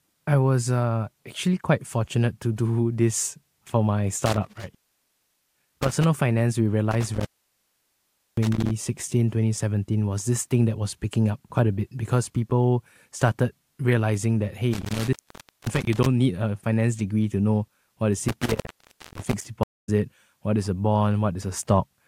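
Speech with four intermittent contact dropouts, at 4.26 to 6.04 s, 6.91 to 8.71 s (after "finance we"), 14.73 to 16.06 s (before "need a finance degree") and 18.28 to 19.46 s (after "to know what is"). Each is a loose connection opening for 0.54 to 1.13 s, with crackle at the edges and faint hiss in the gap. At 19.63 s a stream reconnect causes 217 ms of silence, after which a fresh decoder resumes the audio about 0.15 s further on.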